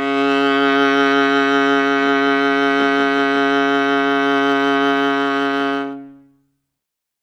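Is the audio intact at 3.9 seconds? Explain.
Yes, the music is intact at 3.9 seconds, with no fault at that moment.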